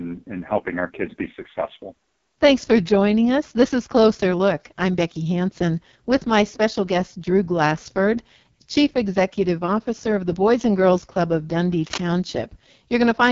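From the start the speech carries AMR wideband (HD Voice) codec damage: a rough, raspy buzz typical of the lowest mode, which fits 6.6 kbit/s. A spectrogram shows a hard ceiling at 7.2 kHz, with smeared, noise-like energy replacing fine detail near the top.

From 11.77 to 11.98 s, cable scratch noise breaks in as a brief rustling scrape, only slightly quieter than the speech. It is likely a worn connector shifting. The waveform shows dense, jagged spikes, and the spectrogram shows a ragged broadband smear.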